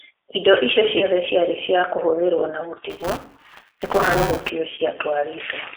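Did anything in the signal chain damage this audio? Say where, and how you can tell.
Yes. Throughout, the codec stage has narrowed the audio to a telephone line of about 300 Hz to 3.6 kHz. The G.729 codec at 8 kbit/s gives it a rough, synthetic texture. That texture shows it is codec modelling damage, not simple band-limiting, which would sound dull but clean.

On the network side, VoIP packet loss concealed by the speech codec occurs at 0.98 to 1.06 s and again at 4.75 to 4.80 s. Each is a single lost packet of about 30 ms. Instead of a silent gap, the decoder stretches the last sound into a buzzy, fading tone, and the audio stays weak briefly afterward.

At the driver or buffer stage, buffer tearing runs from 2.90 to 4.50 s as a steady 200 Hz robotic rattle heard only while sound is present. Roughly a fifth of each period replays audio about 10 ms old, with hard joins on both sides. That rate points to a period of about 5 ms. 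Its fixed periodicity separates it from codec roughness, and it persists rather than fading like concealment.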